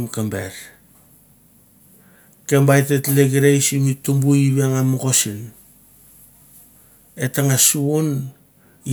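A recording of speech, with no technical faults to be heard anywhere in it. Nothing in the playback calls for a time or a cause.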